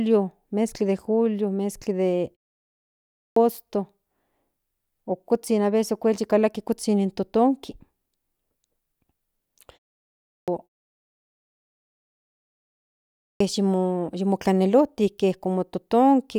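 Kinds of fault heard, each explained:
Clipped start after a pause: the playback device drops into a low-power or unlocked state during silence and is slow to come back, so the opening of the next phrase never reaches the output. In this speech it happens three times, at 2.96 s after a 0.68 s pause, at 10.01 s after a 0.31 s pause, and at 12.96 s after a 2.36 s pause. Each time roughly 0.40 to 0.47 s of onset is lost, and the phrase begins abruptly, already partway in.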